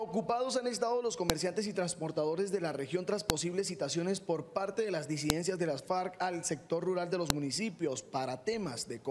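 File header played as audio at 1.30, 3.30, 5.30 and 7.30 s: the clip was assembled from separate WAV pieces, each 2.0 s long, and the header bytes at the start of every piece were left in and played as if they were samples. Those few dozen bytes bear no relation to the surrounding sound, so each join produces a sharp, loud click or snap at a steady 2-second spacing, regardless of what the audio is doing at that moment.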